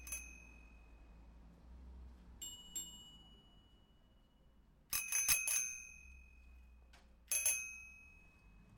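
Throughout, a crude rate conversion repeats samples without filtering, consistent with 44.1 kHz to 48 kHz, adding strong inharmonic fizz that tracks loud, bright sounds.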